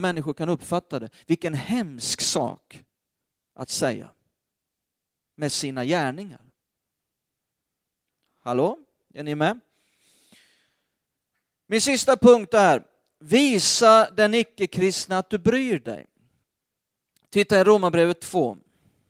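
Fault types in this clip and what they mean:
Nothing in this speech recording stands out as a fault, so there's nothing to list here.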